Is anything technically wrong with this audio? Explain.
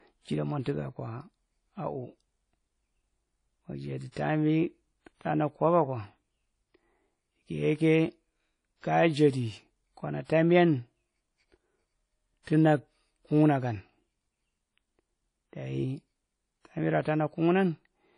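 Yes. The speech carries plainly audible codec damage throughout, likely from WMA compression at a low bitrate, around 32 kbps. The quantisation noise left by long transform blocks gives the audio a ringing, washy quality with a hiss that rises and falls with the level of the speech rather than sitting at a steady floor.

Pre-echo occurs at four points: 4.12 to 4.16 s, 8.81 to 8.83 s, 10.25 to 10.29 s and 12.43 to 12.47 s. Each time a sharp onset lands late in a coding block, the noise budget set for that loud onset is spread across the whole block, including the quiet stretch just before it. The result is a brief hiss of roughly 30 to 50 ms ahead of the attack, which itself sounds softened and smeared.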